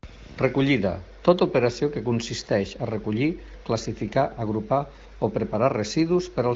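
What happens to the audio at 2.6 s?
Nothing goes wrong at 2.6 s: the speech passes intact through the AMR wideband (HD Voice) path, which here runs at 15.85 kbit/s and does only light damage.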